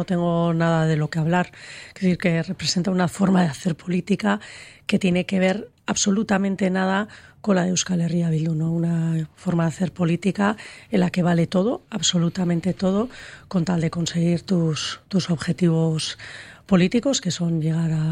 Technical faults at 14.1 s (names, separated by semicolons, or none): none